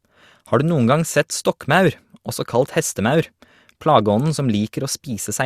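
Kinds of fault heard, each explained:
No faults can be heard.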